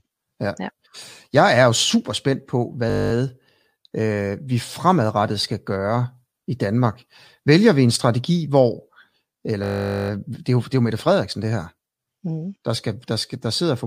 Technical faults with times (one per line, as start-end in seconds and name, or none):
2.90-3.12 system hang loop
9.64-10.10 system hang loop